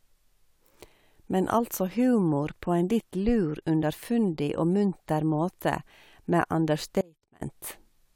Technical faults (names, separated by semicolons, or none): audio dropout to a faint residue